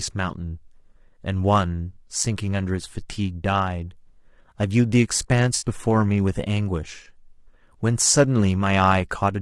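From the start the speech sounds rough and grainy, with noise filling the gaps between harmonics and a synthetic-sounding top band, most likely low-delay AAC compression (AAC-ELD) at a low rate, around 32 kbps. Unlike broadband hiss, the grain follows the voice. At 5.55 to 5.65 s comes AAC frame loss with concealment: the decoder patches roughly three lost frames from earlier spectrum, leaving a brief smeared, phasey blur rather than a clean silent dropout.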